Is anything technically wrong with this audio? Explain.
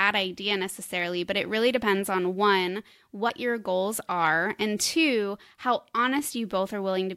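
Yes. At 3.28 s, between "really depends on one" and "your goals are and", damaged data in the compressed stream makes the decoder lose sync, causing a brief blip.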